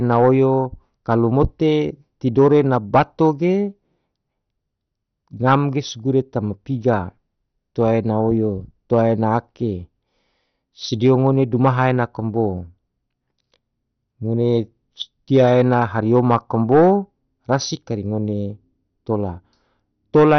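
Throughout the speech, nothing sounds above 6.1 kHz, and the remaining bands flicker with a gurgling, granular roughness, likely MP2 compression starved of bits, consistent with roughly 48 kbps. Unlike a clean low-pass, the upper bands drop out unevenly and what survives is coarsely quantised.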